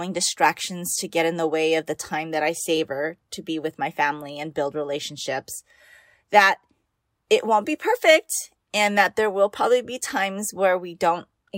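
No technical faults occur anywhere in this speech, so there is nothing to describe in time order.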